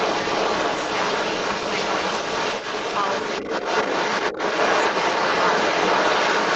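From 0 to 6.55 s, the echo canceller likely missed the loudspeaker playback, so the other side's voice leaks through, roughly 10 dB louder than the speech.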